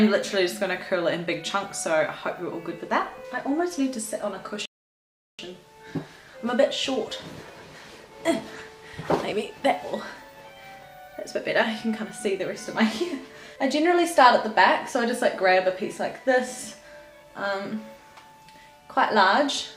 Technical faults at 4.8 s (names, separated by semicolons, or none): rebuffering stall